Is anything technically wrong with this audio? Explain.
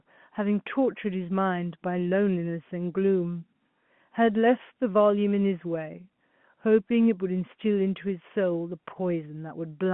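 No, no technical faults.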